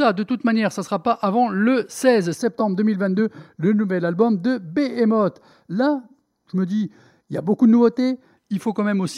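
From 2.37 s to 8.37 s the speech takes on channel delay (comb filtering). One channel lags by roughly 0.2 ms, and summing to mono cancels a first notch near 3 kHz. It sounds hollow and phasey. A spectrogram shows fixed, evenly spaced dark horizontal bands.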